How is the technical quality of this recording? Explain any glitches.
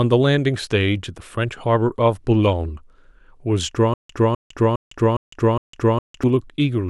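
The recording has one clear glitch. From 3.94 to 6.23 s comes a stutter with silent gaps. A 254 ms speech fragment plays five times, each followed by 156 ms of digital silence, likely from a stalled stream replaying its last buffer at each retry. The waveform shows identical blocks separated by flat lines, the spectrogram shows repeated patches between blank columns, and the speech meant for that span is lost.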